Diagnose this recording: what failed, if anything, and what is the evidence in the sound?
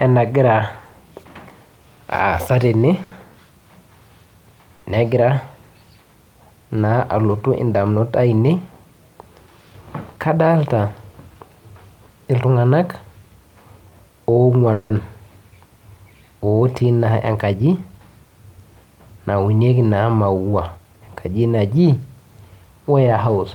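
Twice the speech hangs on one sound for a beat, from 3.03 to 3.13 s and from 4.75 to 4.85 s, each held about 80 ms with a faint buzz or dip before carrying on intact. These are short stalls from a late packet at the network and jitter-buffer stage: the buffer ran dry, so the receiver stretched the last sound until the packet arrived.

Three stretches sound rushed at unchanged pitch: 9.66 to 10.36 s at 108% speed, 16.84 to 17.99 s at 109%, and 20.77 to 21.29 s at 109%. This is jitter buffer speed-up: the receiver trimmed pitch-period slices, roughly 70, 100 and 50 ms in total, to shed excess buffered delay.

At 14.73 to 14.92 s the speech turns into a continued buzz or hiss that fades, lasting about 170 ms, with no silent stretch, then resumes without losing anything. This call audio freeze likely comes from packets held up in the network, emptying the jitter buffer while the receiver extended the last sound.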